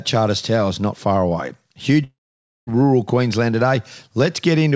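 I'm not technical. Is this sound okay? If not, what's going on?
No. From 2.04 to 2.70 s the speech breaks off. The last sound stretches into a brief fading buzz, then goes silent for about half a second, and the talking picks up again with a piece missing. This is likely a long network dropout, where around 0.64 s of audio never arrived during the call. The call's G.722 codec also passes nothing above 8 kHz.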